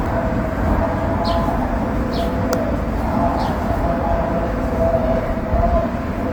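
An everyday-sound recording carries plainly audible Opus compression from start to finish, likely from encoding in the music (CELT) mode at a low rate, with damage consistent with roughly 24 kbps. Each band keeps its energy, so the sound comes across grainy and rough rather than hollow. That sets it apart from MP3, where empty bands swirl and warble. The bandwidth stays full, reaching up to about 20.2 kHz.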